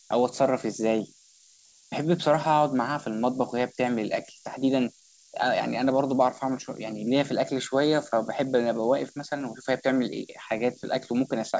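Right from the start there's low bit depth with noise shaping. The audio sounds like it's sitting on very few bits, around 6 by the sound of it. The rounding error has been pushed up in frequency, so you get a constant thin hiss that gets brighter toward the top. It's shaped and only roughly 10 dB under the speech, a steady hiss under everything. It tops out where the call path's band stops at 8 kHz, which fits a wideband G.722-style codec.

Also running the whole way through is clock drift between sender and receiver. The sender's clock seems to be running about 5% slow relative to the receiver. That means the jitter buffer keeps going short of material and has to keep patching over the gap. It's why the timing never quite settles.

You hear that as repeated timing corrections from about 0.20 s to 11.39 s. The receiver keeps repeating little slivers to stretch things out, so the speech plays at around 95% speed. 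The repeats are all in the same direction but unevenly spaced. Each one is tiny, but together they add up to roughly half a second of extra length. The effect is a faintly sluggish, slightly lumpy tempo with the odd small hiccup, not clean, even pacing.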